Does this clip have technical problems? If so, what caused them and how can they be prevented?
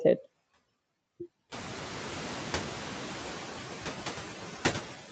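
Yes. Noise suppressor artifacts run through the whole clip. The suppressor judges which frequency bands hold steady noise and lowers them frame by frame. Here it takes off only about 3 dB. So the background dips a little in the gaps and returns under the speech. The room noise rises by about 18 dB from roughly 1.5 s and then sits about 16 dB below the speech, which makes the suppressor's small, shifting cut easier to hear. The call's microphone processing leaves nothing above 8 kHz. To prevent this, lower the room noise at the source so the suppressor has less to remove.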